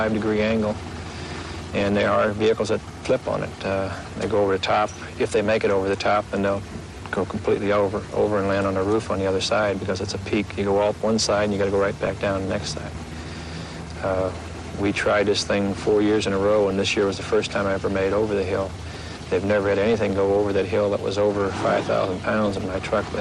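Throughout, coding at too low a bitrate, which fits about 80 kbps, is likely MP2 compression starving the sub-bands of bits, switching upper bands off and quantising the rest coarsely. The sound is dull and plainly damaged, with a gurgling, granular roughness.

DAB burbling follows, as sparse bit errors slip past error correction into the MP2 data, corrupting sub-band samples and scale factors. Brief bursts of burbling land at 12.05–12.10 s, 16.60–16.71 s, 19.94–20.05 s and 22.46–22.58 s, with a longer stretch at 13.74–14.49 s.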